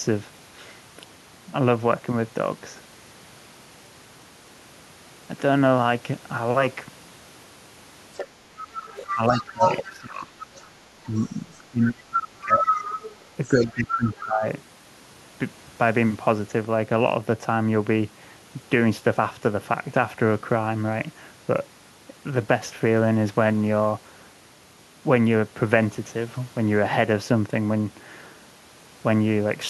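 From 8.14 to 11.59 s a second voice sits about 5 dB under the talker. This is the other side's voice leaking through, likely loudspeaker echo the canceller missed, visible as a second overlapping harmonic stack on a spectrogram. Between 9.14 and 10.38 s the talker's level drops by roughly 20 dB. This is speech suppressed in double talk, likely the canceller turning both voices down, and the waveform envelope caves in there. A deeper drop of about 25 dB follows from 11.18 to 12.86 s. The leak returns from 12.49 to 14.25 s at roughly the talker's own level, and a further dip of about 15 dB comes from 13.52 to 14.44 s.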